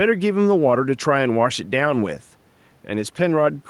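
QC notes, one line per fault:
No faults found; the speech has only faint room noise about 38 dB below it, which belongs to the recording space rather than the signal chain.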